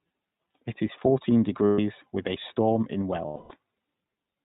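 From start to finish the speech carries plainly audible iLBC codec damage. The sound is clear but slightly rough and synthetic, which fits a 20 ms frame mode at around 15 kbps. On a spectrogram all energy stops at a hard ceiling of 4 kHz, with nothing above it.

The first instance of lost iLBC frames runs from 1.67 to 1.80 s, about 0.13 s. The decoder fills the gap by repeating the last pitch cycle blended with noise, so the sound briefly freezes into a held, faintly buzzy vowel. On the spectrogram the harmonics run as flat, unchanging horizontal lines, and the waveform shows one period repeated. A longer loss follows from 3.26 to 3.52 s, about 0.27 s. Here the concealed tone fades in level, so the waveform envelope tapers. After each gap the speech is correct again almost immediately.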